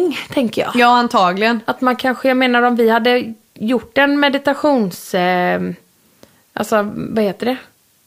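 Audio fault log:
No technical faults are audible anywhere in the speech signal.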